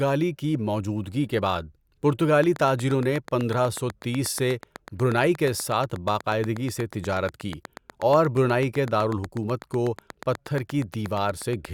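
A speech recording with a train of clicks from 2.44 s to 11.66 s. Regular, same-shaped ticks arrive about 8.25 times per second, around seventy in all. They peak about 5 dB above the speech and stay audible in pauses. Likely cause: interference or a faulty connection or power supply.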